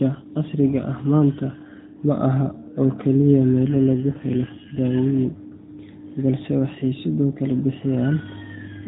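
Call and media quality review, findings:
AMR rate drop, 3.64 to 4.82 s, right after "ma ahan oo keliya". Speech turns rougher and buzzier, with no gap or band change. This fits the network forcing AMR from about 12.2 down to 5.9 kbps on a weak link.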